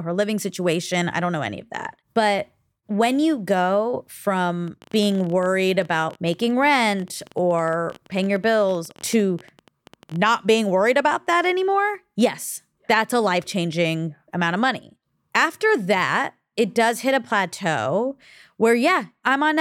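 A speech recording with a train of clicks running from 4.68 s to 10.3 s, ending just before "being worried about that". Over those five and a half seconds a fast, uneven ticking of around a hundred similar pops sits on top of the sound, averaging 16 clicks per second at irregular spacing and peaking at about the level of the speech itself. It is likely caused by electrical interference from nearby equipment or a faulty connection or power supply injecting repeated pulses.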